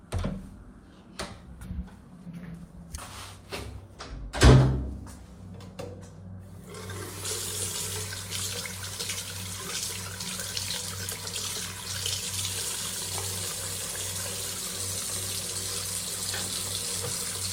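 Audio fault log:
No audible faults found.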